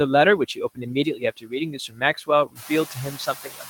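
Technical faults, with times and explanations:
Throughout, noise suppressor artifacts: the suppressor pulls down the frequency bands it judges to be steady noise by about 6 dB, frame by frame, so the background dips between phrases and swells back under them. On a spectrogram the noise floor looks blotchy, with scattered isolated specks and holes. On the waveform the floor pumps in level instead of staying flat.
0.75–1.53 s, 1.7–2.29 s and 2.46 s to the end, speech cut by the noise suppressor: the suppressor mistakes parts of the speech for noise and turns them down with the background, by up to about 17, 19 and 20 dB respectively. In each of the first two spans, around a third of a second is affected. Soft consonants and word endings sound swallowed or faint. The last span coincides with the room noise rising about 11 dB near 2.5 s, leaving it only about 17 dB under the speech. A spectrogram shows speech energy, especially high-frequency consonant detail, abruptly gapped or faded. 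On the waveform, syllable tails collapse toward the floor.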